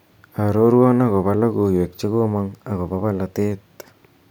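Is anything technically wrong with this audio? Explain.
Yes. From 2.02 s to 3.52 s the speech suddenly runs about 6% faster and sits roughly a semitone higher (101 cents), then snaps back to normal speed and pitch. This is a drift correction step. The likely cause is clock-matching software that found two clocks disagreeing and changed the playback rate in a single jump to drain or refill its buffer. Because speed and pitch move together, the passage is briefly detuned and hurried.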